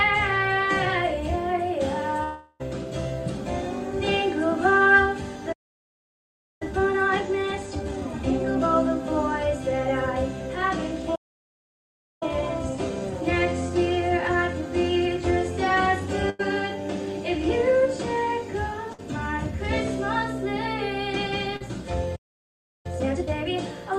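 At 2.23 s a long network dropout fills about 0.36 s up to 2.62 s with a fading continuation of the last sound, likely from audio that never arrived; the spectrogram shows smeared, decaying bands before the sound resumes further on.

At 5.52 s the sound stops dead for about 1.08 s, likely a playback stall, leaving a flat waveform and a blank spectrogram column until 6.62 s.

Time-compressed catch-up follows from 6.62 to 8.78 s at 1.5 times speed, hurried but unchanged in pitch, with visibly packed, choppy spectral texture from the cross-faded cuts.

A second likely stall silences the output from 11.15 to 12.23 s, about 1.06 s of flat line, then catch-up runs at 1.15 times until 15.23 s, mildly rushed.

Bursts of packet loss hit at 16.30 s, lasting about 0.1 s, and at 18.93 s, lasting about 60 ms. Each is a held buzz or hiss fading out, seen as stretched, blurred harmonics before the audio jumps ahead.

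At 21.56 s a short concealed packet loss covers about 40 ms, heard as a brief smear or wobble, a small smudge on the spectrogram.

A final likely stall blanks 22.15 to 22.86 s, about 0.69 s, then catch-up at double speed runs to 23.54 s, audibly rushed and densely compressed.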